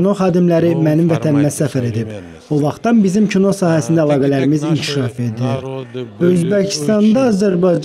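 A time-stretched section runs from 4.85 s to the end, where the audio suddenly slows to about 0.63 times its pace while the pitch holds steady. The likely cause is software lengthening it by repeating short fragments, which makes the audio drag.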